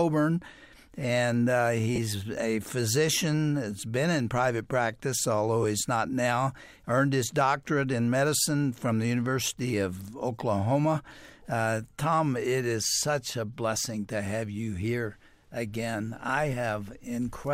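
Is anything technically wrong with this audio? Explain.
Yes. Lost LE Audio frames at 1.96–1.98 s, about 20 ms, and briefly at 5.63 s and 16.28 s, about 10 ms each. The LC3 decoder covered each gap by reusing the last spectrum with randomised signs, so the sound briefly smears into a noisy blur.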